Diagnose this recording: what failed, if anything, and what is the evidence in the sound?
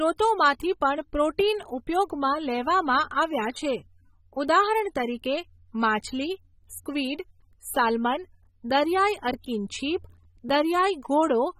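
Across the whole speech clip the sound is dull and smeared, with plainly audible coding damage and nothing above 16.5 kHz. This is a codec-stage fault, likely AAC compression in its AAC-LC form. The encoder quantises each frame's spectrum against a hearing model and, when bits run short, drops the top band and coarsens what remains. The hard ceiling and the degree of damage point to a low bitrate, around 27 kbps.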